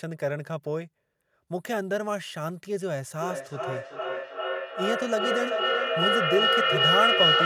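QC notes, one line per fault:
3.18–7.45 s: feedback howl; gain around a two-device loop builds a tone near 3 kHz, pulsing roughly every 0.4 s, about 6 dB above speech.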